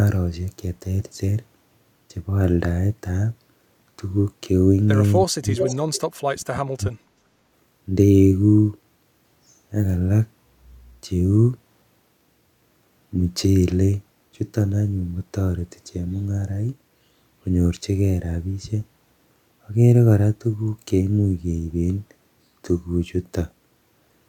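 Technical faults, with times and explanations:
5.25–5.6 s, speech suppressed in double talk: The speech sinks by about 40 dB for around a third of a second. This is likely an echo canceller that heard both ends at once and turned the near talker down.
5.57–5.77 s, echo leak: A delayed copy of the speech surfaces 379 ms late, only about 5 dB below the direct sound. The likely cause is a loudspeaker echo that the canceller failed to remove.
5.93–6.01 s, echo leak: A short scrap of the same echo returns, again 379 ms behind. This time it sits about 20 dB down, a faint ghost. The steady delay likely points to the same uncancelled loudspeaker path.
6.2–7.0 s, speech suppressed in double talk: The speech is ducked again, by up to about 40 dB, for most of this stretch. It likely happens because the canceller cannot separate its own talker from the far side's echo.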